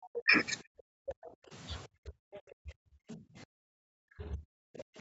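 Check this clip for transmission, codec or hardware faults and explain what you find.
The clip contains echo-canceller faults during moments when both sides of the call were talking. There are three kinds of fault.

Speech suppressed in double talk, from 0.1 to 1.15 s, 1.87 to 2.13 s, and 2.62 s to the end. The echo canceller likely could not separate the talker from the loudspeaker echo, so it turned both down. The speech dips deeply, by roughly 40 dB at worst. About half a second is lost in the first stretch.

Other side's voice leaking through, at 1.07 to 1.31 s, 2.33 to 2.41 s, 3.1 to 3.14 s and 4.77 to 4.84 s. Echo removal likely fell short, leaving loudspeaker sound in the microphone signal. A second voice can be heard in brief scraps. The first scrap sits roughly 15 dB below the speech, and the later ones are around 20 to 25 dB below.

Background gated by the echo canceller, from 1.43 to 1.51 s. 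While the loudspeaker was playing, the canceller clamped the microphone hard. The room sound drops by about 15 dB for roughly 70 ms, then returns. Throughout the clip the audio stops at 8 kHz, which fits a wideband Opus call.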